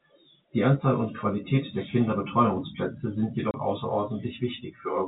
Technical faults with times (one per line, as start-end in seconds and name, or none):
3.51-3.54 packet loss filled with silence